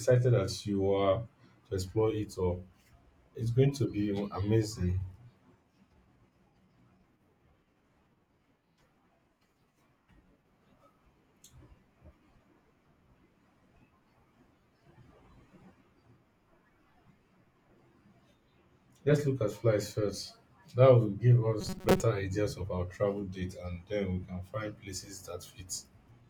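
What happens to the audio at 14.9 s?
Nothing goes wrong at 14.9 s; the speech there runs on intact, with no dropout, click or distortion.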